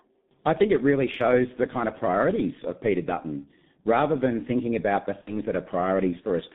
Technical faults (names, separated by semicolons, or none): G.723.1 codec; VoIP packet loss concealed by the speech codec